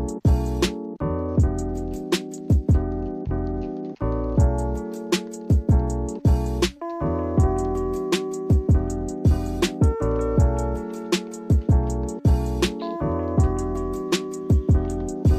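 No technical faults can be heard anywhere in this audio.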